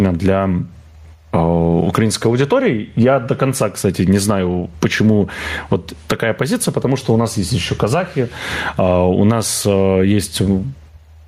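Speech with gain pumping throughout, the gain swinging by around 15 dB. This likely comes from excessive input gain driving a fast limiter or compressor, which flattens the level and squashes the dynamics.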